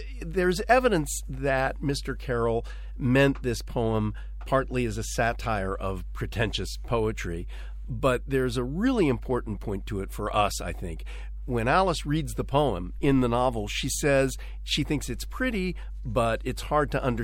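From start to finish, mains hum sits under the speech as a steady 50 Hz drone, fairly loud at roughly 10 dB below the speech, from power-line interference such as a ground loop. A spectrogram shows an unbroken horizontal line at 50 Hz, while the waveform carries a constant low ripple that stays visible in the pauses.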